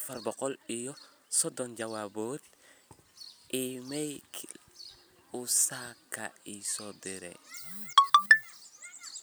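Right from the start, 0.0 to 2.06 s, there's a time-stretched section: the speech runs about 1.45 times fast with the pitch unchanged, so it sounds rushed, then the pace snaps back. Likely software squeezing it to fit by dropping tiny slices.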